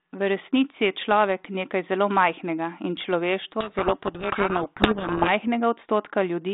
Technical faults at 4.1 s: codec payload misread

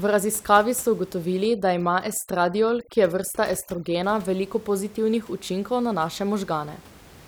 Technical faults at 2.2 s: overdone noise removal

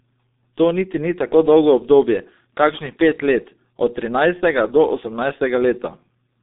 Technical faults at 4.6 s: G.723.1 codec

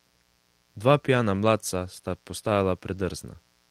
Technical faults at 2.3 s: mains buzz

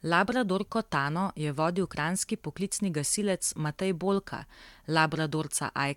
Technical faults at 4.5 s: none

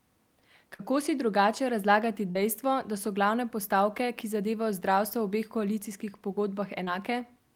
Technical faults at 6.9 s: short concealed packet loss

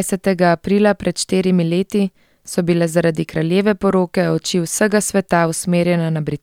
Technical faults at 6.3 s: none

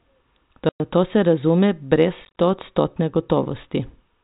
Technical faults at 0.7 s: packet loss filled with silence

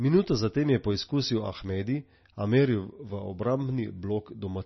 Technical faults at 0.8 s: MP3 compression

